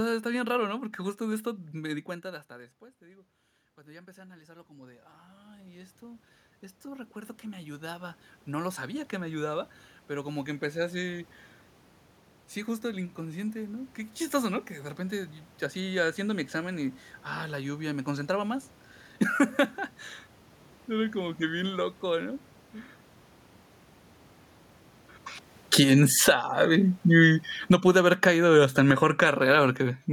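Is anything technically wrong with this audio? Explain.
Yes. Two automatic gain control faults are audible, both set off by changes in level at the microphone.

Automatic gain rising, from 1.85 to 11.3 s: around 2 s the talker moves away and the input drops by about 24 dB. The gain control responds by slowly raising its gain by about 19 dB over roughly nine seconds, so the speech and the room noise swell up together.

Automatic gain falling, from 25.6 to 29.3 s: after the talker moves at around 24.5 s, the control finds the input too loud or its background too strong. The control then pulls its gain down by about 18 dB over several seconds, and the speech and room background sink together.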